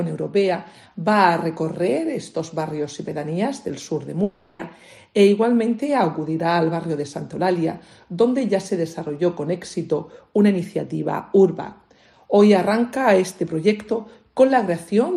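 From 4.23 to 4.61 s, a long network dropout likely leaves 360 ms concealed by a fading buzz that never falls fully silent, unlike a hard mute.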